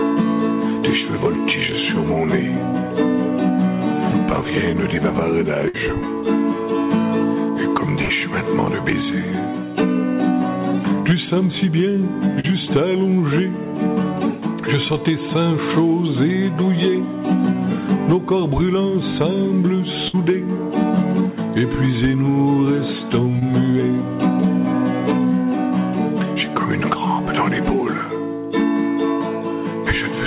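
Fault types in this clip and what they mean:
Burst of packet loss: A run of audio went missing in transit, and the receiver bridged the hole by stretching out the last bit of sound and letting it fade, then jumped ahead with that stretch simply gone. You can hear it three times: at 5.68 s and 20.08 s, each covering about 60 ms, and at 8.02 s, a longer one of about 80 ms. Each shows up as a brief held, dimming patch followed by a small skip.
Short concealed packet loss: A smaller chunk didn't reach the decoder in time, so the receiver invented a few hundredths of a second by carrying the previous sound forward and then easing back into the real signal. At 12.40 s the patch is about 40 ms and comes across as a quick smear. At 23.39 s it's only about 20 ms, more of a tiny wobble, all within the narrow, 4 kHz-capped band of the call audio.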